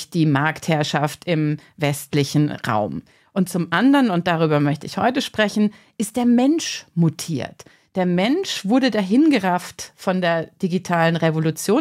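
No technical faults can be heard anywhere in the speech recording.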